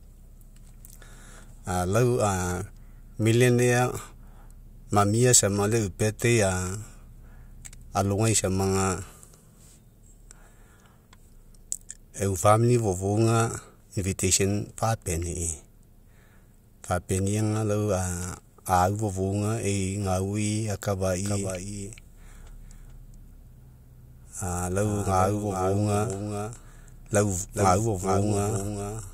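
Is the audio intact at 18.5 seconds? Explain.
Yes, the speech at 18.5 seconds comes through intact, with no dropout, glitch or other fault at that moment.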